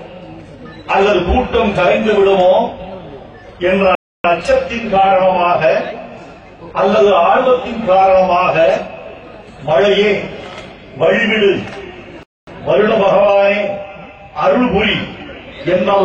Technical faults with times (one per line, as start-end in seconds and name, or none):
3.95-4.24 rebuffering stall
12.23-12.47 rebuffering stall